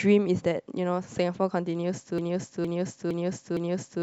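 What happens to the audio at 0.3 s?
Nothing goes wrong at 0.3 s; the speech there plays through intact, with no audible fault.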